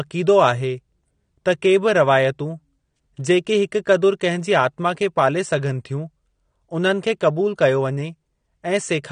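Across the whole clip the speech has plainly audible AAC compression damage, likely from AAC-LC at a low bitrate, with the degree of damage fitting something around 32 kbps. The encoder has run short of bits, so it discards the top of the spectrum: nothing sounds above 9.7 kHz, which makes the speech dull. Coarse quantisation of the frequency lines in each frame smears transients and leaves a warbling, fizzy texture on sibilants and sustained sounds.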